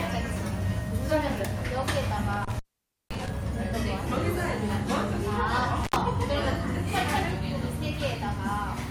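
A recording of sounds with intermittent contact twice, at 2.33 to 3.37 s (about a 515 ms dropout) and 5.84 to 5.96 s (67 ms), where a loose plug or cable briefly opens, crackling at the edges and leaving faint hiss.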